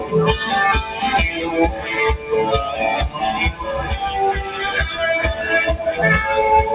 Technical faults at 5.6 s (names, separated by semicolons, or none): noise suppressor applied to music or sounds